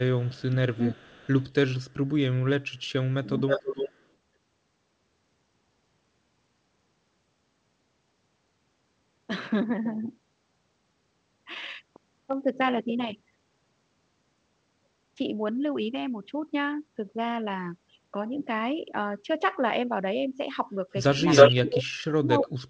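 From 0.19 to 1.53 s, an echo leak, likely from a far-end loudspeaker whose echo canceller let its microphone pickup through, returns a copy of the speech delayed by 411 ms, faint at about 30 dB below the talker. Inside that span, from 0.45 to 1.03 s, speech is suppressed in double talk, likely because the canceller could not tell the talker from the echo and turned both down. The voice dips by up to roughly 25 dB in pieces totalling around 0.4 s.

Further echo leak scraps follow at 1.90 to 1.94 s and 2.72 to 2.91 s, each about 40 dB down at the same 411 ms delay.

Between 3.35 and 3.74 s, double-talk suppression returns, likely from the same cause, cutting the speech by up to roughly 20 dB for about 0.3 s.

Overlapping that, from 3.49 to 4.06 s, the echo shifts to a 319 ms delay and rises to about 5 dB below the speech.

Near the end, from 21.29 to 21.84 s, the leaked echo at 319 ms is about 10 dB louder than the talker. 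From 21.51 s to the end, double-talk suppression pulls the speech down by roughly 40 dB.

Throughout, the call path's bandwidth stops at 8 kHz, which points to a G.722 wideband codec.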